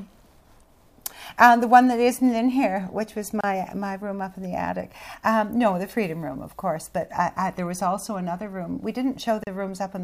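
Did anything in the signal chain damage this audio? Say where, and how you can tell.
Yes. Brief dropouts at 3.41 s (28 ms) and 9.44 s (34 ms), six seconds apart: a codec-stage gap at a join of encoded pieces, from untrimmed encoder delay and padding.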